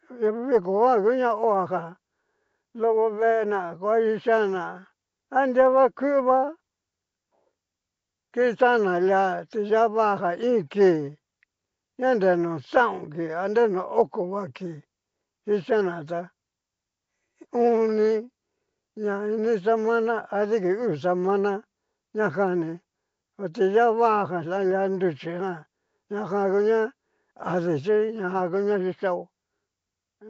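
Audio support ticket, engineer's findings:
Rough, hissy halo and smeared, underwater quality on speech across the whole clip; no content above 7.7 kHz. Likely Nellymoser compression: Flash-era codec, fixed low bit allocation, starved bands noise-filled. Damage level points to roughly 32 kbps.

Faint regular ticks, fast enough to read as a soft rattle, every 0.05 s or so from 0.14 s to 30.29 s, clearest on loud sustained speech. Likely clock slip clicks: unsynced device clocks, around 400 ppm apart, single-sample drops or repeats.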